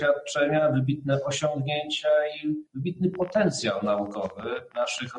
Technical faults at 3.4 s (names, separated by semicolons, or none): noise suppressor applied to music or sounds; train of clicks